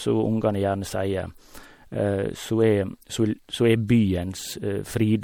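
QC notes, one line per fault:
Throughout: MP3 compression. The speech has a watery, swirling quality, with metallic chirping on s sounds and consonant attacks that smear rather than snap, and nothing is present above 19.8 kHz. The likely cause is a lossy MP3 encode at a bitrate that fits around 64 kbps, too few bits for this material. The encoder drops weak frequency lines that then flicker on and off between frames, producing the swirl and chirps, while coarse time resolution blurs the onsets.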